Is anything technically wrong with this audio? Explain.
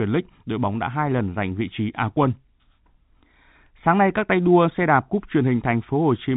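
No, no technical faults heard.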